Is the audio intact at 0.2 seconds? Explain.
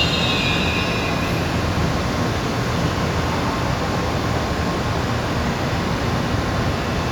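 Yes, at 0.2 s the sound is intact, with no fault present at that moment.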